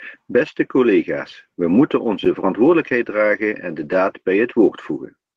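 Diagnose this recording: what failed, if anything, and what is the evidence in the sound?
Network loss covered by the codec: this is a lost packet rebuilt from error correction. From 0.47 to 0.57 s, just before "collega's we moeten onze", the speech turns briefly rougher and noisier but never breaks. About 60 ms was rebuilt, which fits three 20 ms packets lost and each replaced by the low-bitrate copy carried in the following packet. The continuity tells it apart from a dropout, which leaves silence, and from plain concealment, which smears or fades rather than keeping real, coarse detail.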